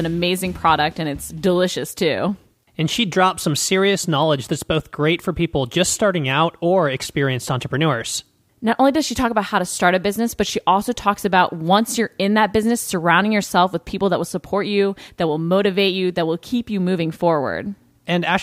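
A speech recording with nothing technically wrong to point to, so there are no times or causes to give.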